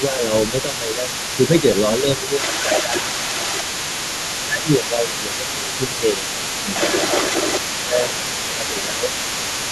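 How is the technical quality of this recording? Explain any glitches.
The recording is marred by two related echo-control problems.

Throughout the clip, from 0 to about 9.7 s, a second voice sits faintly underneath, roughly 10 dB below the talker. This is the other side's voice leaking through, likely because the echo canceller left some loudspeaker sound in the microphone signal.

The talker's speech is suppressed in double talk at 0–0.29 s, 0.5–1.25 s, 1.99–3.22 s, 4.45–6.41 s, 7.66–8.22 s and 8.47–9.14 s. The level dips while the other voice is present. Early dips are slight, around 5 dB. Later ones, from 4.45 s on, are deeper, around 10 dB. The echo canceller likely cannot tell the talker from the echo, so it turns both down.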